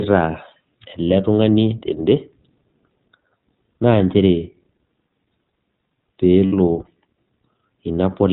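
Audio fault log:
throughout iLBC codec: the speech is band-limited to narrowband with nothing above 4 kHz, and sounds slightly rough and synthetic, plainly so, because each 20 ms frame's excitation is coded on its own at a low rate, which fits a bitrate near 15 kbps.
6.46–6.54 s lost iLBC frames: for about 60 ms, which fits three lost 20 ms frames, the decoder repeats the last pitch cycle blended with noise, giving a brief held, faintly buzzy vowel, and the voice recovers almost immediately after, since iLBC frames decode independently.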